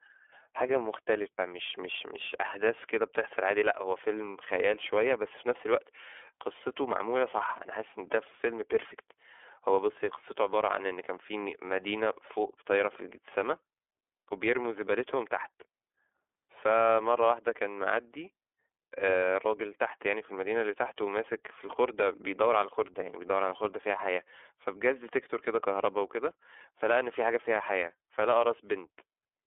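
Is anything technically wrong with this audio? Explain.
Yes. The speech has been through the iLBC codec for its whole length. It is a narrowband VoIP coder that codes each frame's excitation independently of the previous frame. The sound is confined to a telephone band of about 300 Hz to 3.5 kHz, with nothing above 3.7 kHz. The framing points to 30 ms frames, which fits the 13.33 kbps mode. The coding damage is plainly audible as a rough, slightly synthetic grain.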